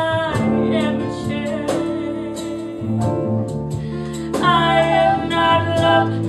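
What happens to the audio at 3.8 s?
Nothing goes wrong at 3.8 s; the audio plays through that moment cleanly, with no dropout, click or distortion.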